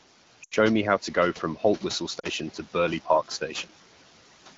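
Speech over a phone call carries steady background noise that ducks by about 12 dB in the gaps and swells back under each phrase. These are noise suppressor artifacts: the suppressor judges, frame by frame, which bands hold steady room noise (sitting about 18 dB below the speech) and pulls them down, so the noise floor pumps with the talking. At 0.43 to 0.54 s, just before "me how to go", the voice drops to near silence within a couple of frames, then returns briefly weak or rough. A shorter dropout follows at 2.19 to 2.27 s. These are lost AMR speech frames. Radio errors corrupted the packets, so the AMR-WB decoder, running at 12.65 kbit/s, repeated the last good pitch and vocal tract settings with falling gain. The 80 ms and 40 ms losses are four and two consecutive 20 ms frames going missing.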